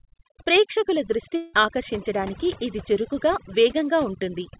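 Overdone noise removal runs through the whole of this speech recording: the suppressor was set so aggressively that frequency bands close to its noise estimate are pushed almost to nothing, taking quiet parts of the voice with them, so the background drops and breaks up into twinkling specks, and the voice is heard within a band that stops at 4 kHz, consistent with a G.711 mu-law call path. A long network dropout follows from 1.36 to 1.55 s, just before "ఆకర్షించడానికి ఇది చురుకుగా": roughly 180 ms of audio never arrived, and the receiver stretched the last sound into a fading buzz lasting about 171 ms to cover the gap, so playback resumes with that stretch missing, likely due to lost packets on the link.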